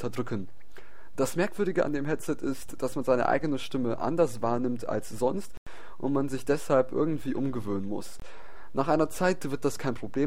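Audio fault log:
5.57–5.67 s and 8.20–8.22 s: block of digital silence. Output buffers were not filled in time, or a calculation produced invalid values, and blocks of zeros were played instead: about 93 ms at 5.57 s, which fits a missed 4096-sample buffer, and about 23 ms at 8.20 s, which fits a 1024-sample buffer. The sound drops out and returns abruptly with no fade, leaving a short hole in each place, longer at 5.57 s.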